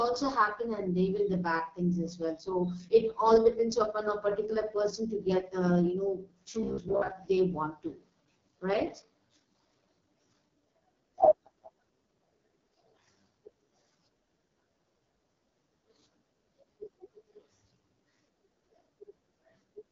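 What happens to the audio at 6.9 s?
From 6.63 to 7.11 s the speech collapses into a rigid, metallic buzz near 67 Hz. This is likely robotic sound from repeated short buffers: roughly half the audio is replaced by a repeated slice, which fits a buffer of about 15 ms. At this moment the clip also carries the rough, raspy texture and the absence of anything above 7.4 kHz that come from the AMR wideband (HD Voice) codec, consistent with its lowest 6.6 kbit/s mode.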